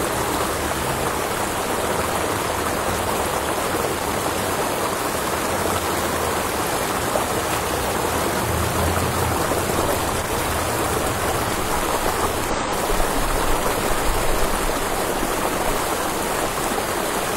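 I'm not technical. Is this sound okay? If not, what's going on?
No. Twice, at 3.98 to 4.14 s and again at 10.10 to 10.37 s, there's loose connector crackle: a worn or dirty plug or socket keeps losing and regaining contact, so the sound is chopped into a rough, scratchy burst. Unlike a digital glitch, it's irregular and lasts a fraction of a second.

At 12.50 to 12.56 s there's a much shorter blip from damaged data in a compressed stream. A small piece of the file was corrupted, so the player lost its place and had to find it again. That produces a brief glitch, not scratching.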